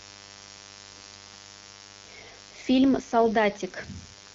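A mains buzz runs from start to finish, underneath the speech. Its fundamental is 50 Hz, and its harmonics stack up into the kilohertz range. That points to sharp switching spikes from a dimmer, a rectifier or a missing shield, leaking into the signal twice per mains cycle. The result is a steady, raspy buzz rather than a soft hum. It sits well below the speech, about 25 dB down. The HD Voice wideband codec, at 12.65 kbit/s, adds only light damage of its own.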